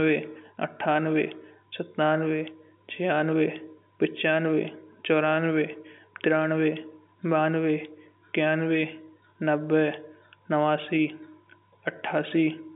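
No technical faults can be heard in this speech.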